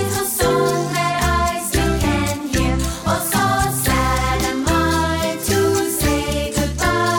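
Nothing in the audio stood out as a technical problem on listening.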